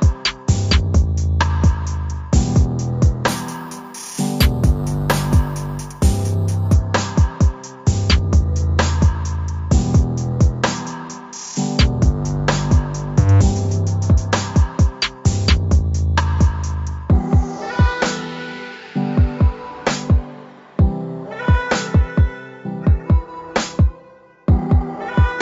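From 3.28 to 6.73 s the sound takes on a bright, metallic fizz. This is imaging from sample-and-hold upsampling. The rate was raised from 16 kHz to 44.1 kHz by repeating samples, with no smoothing filter. Mirror copies of the spectrum therefore appear, the lowest filling 8 to 16 kHz. They sit about 21 dB below the signal and rise and fall with it. The lowest copy moves against the pitch.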